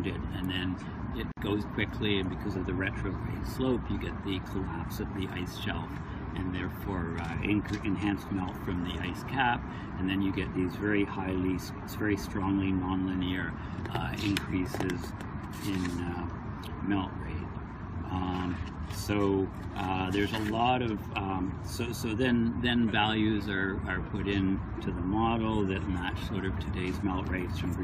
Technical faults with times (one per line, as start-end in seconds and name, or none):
1.32-1.37 gap at a join of encoded pieces